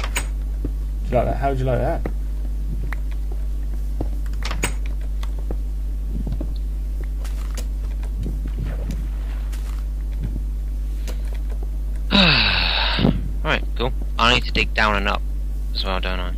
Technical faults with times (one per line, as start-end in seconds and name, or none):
none